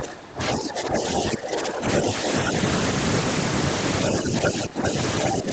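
Speech suppressed in double talk, 0.0 to 2.27 s: the talker's level dips by up to about 15 dB, in pieces totalling around one and a half seconds. The likely cause is an echo canceller that cannot separate the talker from the loudspeaker echo and so turns both down. Other side's voice leaking through, 0.48 to 1.23 s and 1.96 to 2.5 s: a second voice sits about 5 dB under the talker, likely echo that the canceller left in the microphone signal. It leaks through again from 4.04 to 5.24 s. Speech suppressed in double talk returns from 4.2 to 5.51 s, with drops of up to about 10 dB over roughly 0.7 s while both voices overlap.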